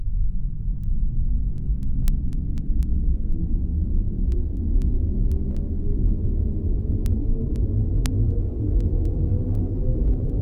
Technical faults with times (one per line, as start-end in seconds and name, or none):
0.34-10.30 word clock ticks